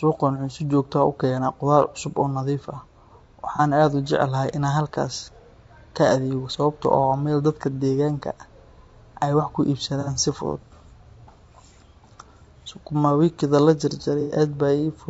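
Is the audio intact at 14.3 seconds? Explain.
No. From 14.21 to 14.35 s there is AAC frame loss with concealment: the decoder rebuilt missing frames from the last good spectrum, producing a smeared, noisy patch. On a spectrogram it appears as a blurred block where the harmonic lines lose their definition.

Around it, the speech sounds rough and grainy with noise between the harmonics, likely from low-delay AAC compression at 32 kbps. A spectrogram shows the gaps between harmonics filled with haze.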